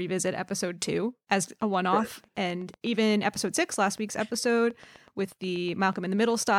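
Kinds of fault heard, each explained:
Train of clicks: a regular ticking at about 8.1 clicks per second, roughly forty in all, about as loud as the speech, likely interference or a faulty connection.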